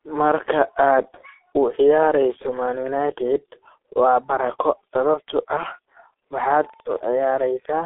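G.723.1 codec coding runs throughout the speech. Its 30 ms frames and slow-updating voice model, at what sounds like roughly 6 kbit/s, leave nothing above 3.8 kHz. The voice is muffled, hoarse and band-limited, with consonants smeared together.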